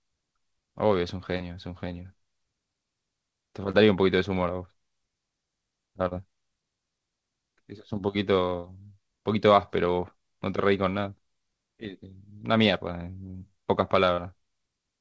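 Short concealed packet loss occurs at 1.37, 3.71, 6.08, 8.60, 13.31 and 14.15 s in this speech. Each time, about 30 ms of audio failed to arrive in time, and the receiver patched the gap by extending the preceding sound, following its pitch when voiced or with shaped noise otherwise, before crossfading back. Each is heard as a brief smear or wobble. The call path's band limit at 8 kHz, which fits a G.722 codec, applies throughout.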